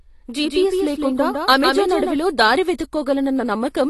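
A second copy of the speech was likely mixed in by a slower capture path, giving a doubled audio track from the very start until 2.16 s. The full-band copy runs about 150 ms behind and roughly 5 dB quieter, with no room colour, and cuts off abruptly. The speech has also likely passed through AAC compression at a low bitrate, around 32 kbps. Nothing remains above 12.1 kHz, so it sounds dull and smeared, with plainly audible warbling and fizz on sustained sounds and sibilants.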